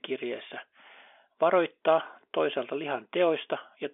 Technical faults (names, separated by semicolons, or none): none